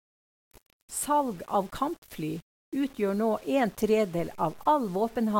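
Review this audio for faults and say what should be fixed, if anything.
The speech carries a grainy, rasping distortion throughout that tracks the voice, turning quieter syllables gritty and making the softest moments sputter or drop out. This is likely low bit depth without dither: rounding to roughly 7 bits leaves error only about 30 dB below the signal. Keep at least 16 bits through processing and add dither whenever reducing word length.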